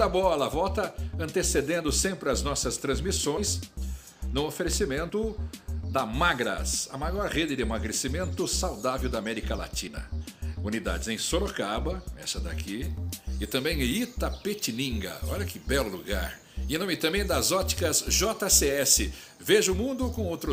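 Compressed frames skipped at 3.37–3.40, 5.09–5.13 and 9.87–9.90 s: a few 20 ms frames go missing, so the audio jumps ahead by roughly 40 to 70 ms.

Pre-emphasis left on from 12.84 s to the end: an FM-style 50 µs treble boost was never undone, leaving 10 kHz about 10 dB above 1 kHz, so the sound turns thin, bright and sibilant.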